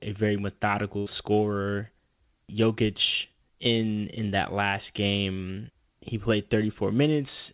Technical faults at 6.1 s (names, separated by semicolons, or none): none